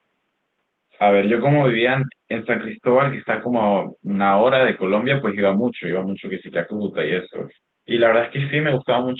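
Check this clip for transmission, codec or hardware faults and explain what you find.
No transmission, codec or hardware faults are audible in this speech; the room noise sits about 52 dB below the speech, and the call path's Opus coding rolls off the top end around 12 kHz as expected for that codec.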